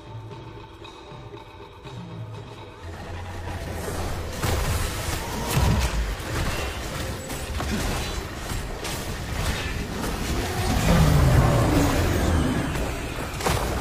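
Nothing in the audio stands out as a technical fault at any point, so there's nothing to flag here.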